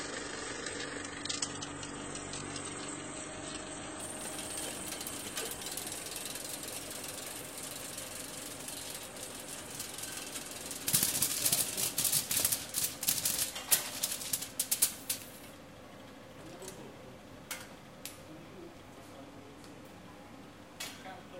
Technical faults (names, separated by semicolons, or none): adaptive stream starting at a low bitrate